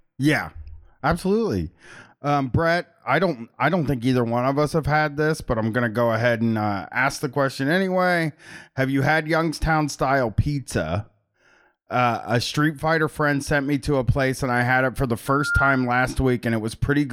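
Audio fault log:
15.26–15.93 s, loudspeaker feedback squeal: a single tone near 1.4 kHz swells up over roughly a third of a second and ends up about 5 dB above the speech. The mic is hearing its own loudspeaker, and at that one frequency the loop gain tops one, so the tone keeps feeding itself until the loop is broken.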